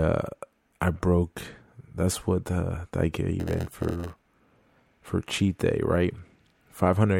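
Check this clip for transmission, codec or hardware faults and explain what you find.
One fault is present in the speech. From 3.39 to 4.27 s there is a block size mismatch (padded). One stage writes shorter blocks than the next stage reads. Zeros fill the rest of each block, leaving a tiny gap in every one. Those repeating gaps make a buzz at 91.9 Hz. The speech also runs slower, at 0.919 times normal speed, with its timbre kept.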